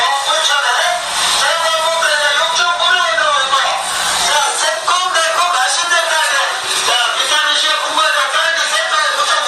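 From the start and across the whole clip there is gain pumping. The gain swings by around 10 dB, pulling the level down as soon as a loud sound arrives, so the level seems to breathe. The likely cause is input gain set far too high, with a fast limiter or compressor pulling it down on each peak. This differs from a noise gate, which cuts the background off entirely. Here loud and soft moments end up squashed closer together.

From 0.87 s to 4.44 s there is mains hum, a steady low tone at 60 Hz that sits roughly 30 dB below the main sound. It comes from the power line leaking into the signal, through a ground loop or a nearby transformer. It holds a fixed pitch, then stops at 4.44 s. It sounds like a smooth low drone rather than a harsh, bright buzz.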